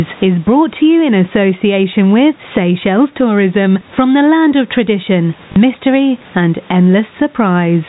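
Throughout this speech clip the level breathes, with a swing of around 15 dB, so loud and soft parts sit closer together and the sound is squashed. This is gain pumping, likely from input gain set far too high with a fast limiter or compressor pulling it down on every peak. The room noise sits about 39 dB below the speech. From 5.52 to 5.56 s there is a brief robotic stutter lasting 40 ms. This is packet loss with the last packet repeated: audio went missing, and the receiver replayed the last packet it had until new data arrived. That span fits two lost 20 ms packets. The narrow telephone band, with nothing above 4 kHz, comes from G.711 coding and is not a fault.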